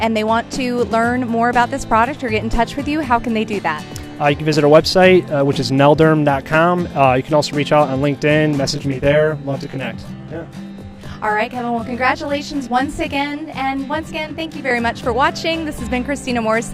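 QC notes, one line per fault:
8.71 to 14.71 s, channel delay (comb filtering): For these six seconds the sound turns rough and slightly doubled. One channel arrives late by around 20 ms, and the two are summed to mono. Content common to both channels cancels at evenly spaced frequencies. The first notch sits very low, near the bottom of the audible range, and the notches repeat upward at a close, regular spacing. With a delay this long, this fixed comb pattern gives the rough, slightly doubled sound.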